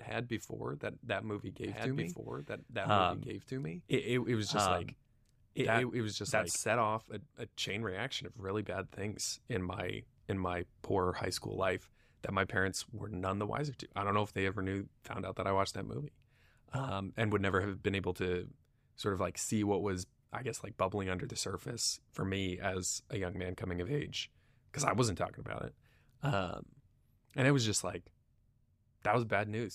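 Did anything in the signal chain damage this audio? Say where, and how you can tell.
Yes. From 1.66 s to 6.56 s there's a doubled audio track: a second full-band copy of the speech runs about a second and a half behind, at roughly the same level, with no room tail, and it starts and stops abruptly. That's likely a second, slower capture path or an edit holding two copies out of step.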